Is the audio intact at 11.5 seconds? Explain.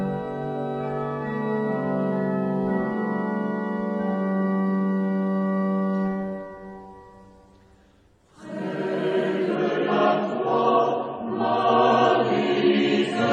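No. At 11.5 seconds the audio is inside a stretch of adaptive stream at a lower bitrate, running from 9.55 s to the end of the clip. The stream switched abruptly to a leaner encoding, roughly what a drop from about 96 to 24 kbit/s AAC would give, so treble above 9 kHz vanishes and the sound turns duller and more smeared. A spectrogram shows the top band cut off sharply at 9.55 s, while the waveform continues without any gap.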